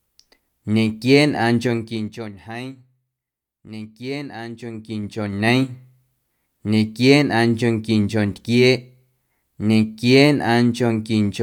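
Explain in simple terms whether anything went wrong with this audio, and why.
Something did go wrong here: zipper noise, twice. Between 1.62 and 2.39 s the speech gets turned down, and from 4.52 to 5.63 s it's brought back up. Instead of gliding, the level jumps in small steps, about ten a second on the way down and a bit slower on the way up. Each jump leaves a tiny click, so you hear a fast ticking, a bit like a zip, riding on the speech while the volume moves.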